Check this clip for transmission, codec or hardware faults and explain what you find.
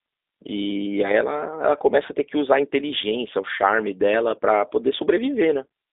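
One fault is present: the whole clip carries G.729 coding damage. Throughout, the speech is rebuilt from a vocal tract filter, pitch predictor and sparse pulses, which fits an 8 kbit/s G.729A link. It sounds plainly rough and synthetic, with a 300 Hz to 3.7 kHz band and nothing above 3.8 kHz.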